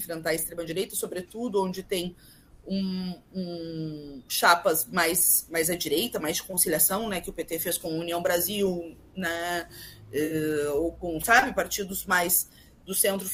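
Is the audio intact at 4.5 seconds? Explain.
Yes, the audio is intact at 4.5 seconds, with no dropout, click, distortion or other fault at that moment.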